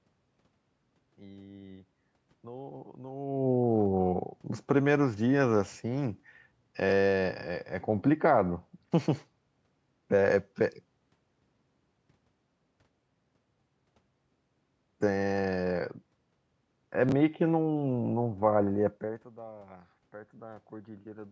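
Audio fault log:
6.89–6.91 s and 17.09–17.12 s, chunks out of order: a short slice of speech plays after the audio that should follow it, late by one 10 ms chunk in the first event and by two in the second. That makes a brief jumbled flicker with three hard joins. Unlike a dropout, no audio goes missing and there is no silent gap. Unlike a stutter, nothing repeats. The same material is only reshuffled.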